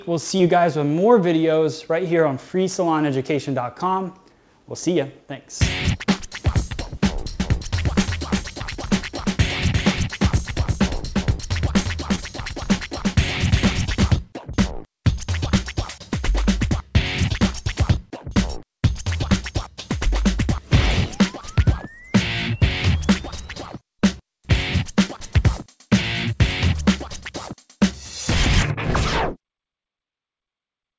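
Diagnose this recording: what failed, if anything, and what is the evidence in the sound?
Short concealed packet loss on the network leg: brief smears at 0.38–0.41 s and 12.15–12.20 s, where the receiver stretched the preceding sound to cover roughly 20 ms gaps.

Doubled audio track from 7.40 to 14.12 s: a full-band copy trails by around 0.4 s, a few dB quieter and with no room colour, likely from a slower second capture path or an edit holding two offset copies.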